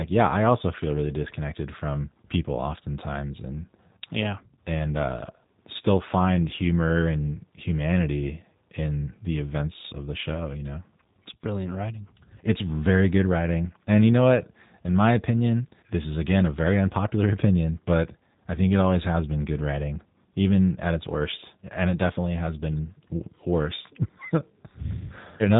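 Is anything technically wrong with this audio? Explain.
Yes. G.729 codec coding runs throughout the speech: the voice is rebuilt from a vocal tract filter, pitch prediction and a few pulses per frame, which fits an 8 kbit/s stream. Nothing passes above 3.8 kHz, and the speech sounds plainly rough and synthetic.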